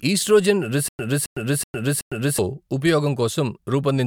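From 0.88 s to 2.39 s the speech falls into a stutter with silent gaps. The same 270 ms burst plays four times, each followed by about 106 ms of dead digital silence, so it recurs every 375 ms at a steady pace. The likely cause is a stalled player or stream replaying its last fragment at each retry before running empty. The true audio for that stretch is simply missing. The silences set it apart from a seamless loop, and the repetition sets it apart from plain dropouts.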